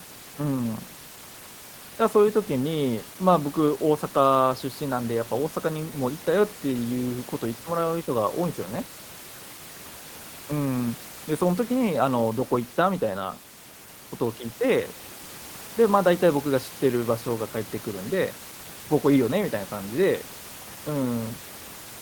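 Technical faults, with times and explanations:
No technical faults are present.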